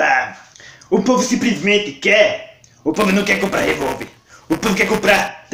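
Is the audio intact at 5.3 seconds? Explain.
Yes, but only just. Buffer tearing runs from 2.94 to 5.28 s: writer and reader cross inside each period, splicing in a small slice of audio about 10 ms old, giving a steady 200 Hz robotic buzz. Unlike an underrun, it leaves no silent gaps.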